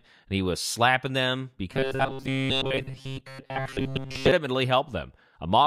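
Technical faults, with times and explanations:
1.72–4.32 s: robotic sound from repeated short buffers, after "he was slapping them", a rigid 134 Hz buzz, likely from a short slice looped while most audio drops; spectrogram shows evenly spaced harmonic lines.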